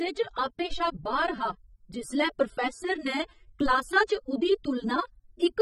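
AAC compression runs through the whole speech clip, from the first moment to the last. Its damage is plainly audible, and nothing is present above 16.5 kHz. This is likely AAC-LC coding at a low rate, which fits roughly 24 kbps. The encoder splits each frame into frequency lines and quantises them coarsely against a hearing model. It drops the top of the band above its cut-off and spends few bits on what remains, so detail is lost across the clip.

A DC step occurs at 0.72 s, between "च आपे" and "शा बाह्र हा जिसलै". The waveform's zero line jumps suddenly to a new offset, as happens when a converter recalibrates or an offset input is switched in. The jump itself is a low thump or click, while the speech carries on unchanged. The offset does not hold but decays away gradually, in the manner of a high-pass filter near 5 Hz.

A second DC step follows at 3.66 s, just after "हा जिसलै प्रोफैस्सर ने". 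It behaves the same way. The zero line shifts abruptly and produces a low thump or click, while the speech continues unaffected. The resulting offset then decays gradually, as if pulled back by a high-pass filter around 5 Hz.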